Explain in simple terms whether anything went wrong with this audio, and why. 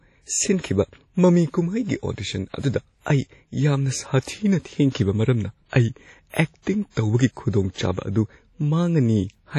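The speech sounds washy and ringing from start to finish, with a hiss that swells and fades along with the voice, and nothing above about 16 kHz. That is likely WMA compression working hard, smearing its errors over each chunk and dropping quieter detail.

Around 3.00 to 3.06 s, a short hiss creeps in just before a sharp sound, which then comes across softened. This is pre-echo: the codec spread about 60 ms of noise meant for the loud moment into the quiet moment ahead of it.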